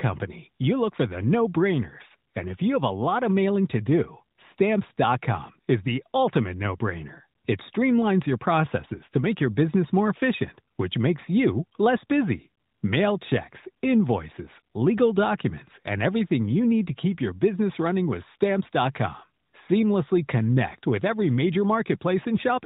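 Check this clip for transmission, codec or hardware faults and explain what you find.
Nothing here points to a transmission, codec or hardware fault; the speech simply carries the narrow, phone-like band of an AMR narrowband mobile codec working as designed, with nothing above 4 kHz.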